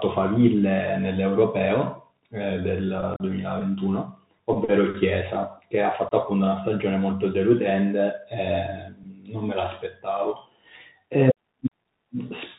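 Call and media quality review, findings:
Bluetooth CVSD headset codec, throughout: narrowband, nothing above 4 kHz, scratchy sibilants, granular hiss under speech. 1-bit delta modulation at 64 kbps with adaptive step size; step lags fast high-frequency content.

Unconcealed Bluetooth headset packet loss at 3.14–3.22 s and 6.09–6.12 s: abrupt holes in speech. About 45 ms lost over 60 ms (longest gap 37.5 ms), then 22.5 ms. Several voice packets dropped and not concealed.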